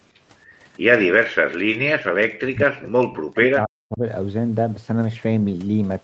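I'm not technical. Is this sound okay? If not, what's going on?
No. From 2.04 to 4.03 seconds, about two seconds, the speech drops away almost to silence. That is speech suppressed in double talk, likely because the call's echo canceller decided both sides were talking at once. It couldn't tell the talker's voice apart from the other side's sound coming back through the loudspeaker, so it turned everything down together. The talker's voice was cut along with the echo it meant to remove.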